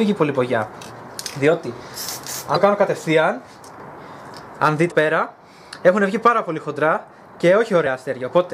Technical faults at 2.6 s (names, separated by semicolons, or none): damaged data in a compressed stream